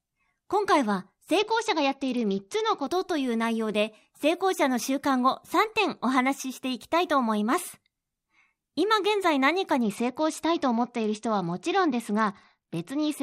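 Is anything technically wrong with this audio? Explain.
Yes. There are two stretches of Bluetooth SBC bit pool drop, from 1.39 to 2.86 s and from 9.82 s to the end of the clip. On a struggling link, the encoder cut its bit budget. The sound points to a fall from a bit pool around 28 to about 9, roughly 78 kbps. That starves the upper sub-bands and quantises the rest coarsely, so the speech turns dull and gritty in those spans.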